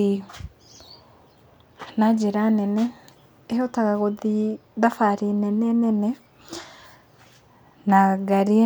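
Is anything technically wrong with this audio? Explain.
No, nothing technically wrong can be heard in this speech recording. There is no fault to point to at any moment in it.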